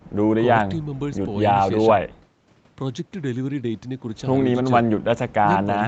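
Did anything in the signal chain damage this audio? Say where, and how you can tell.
No, the speech shows no damage from any stage of the chain, and its content stopping at about 8 kHz is the expected band limit of a wideband call path with ordinary microphone processing, not a fault.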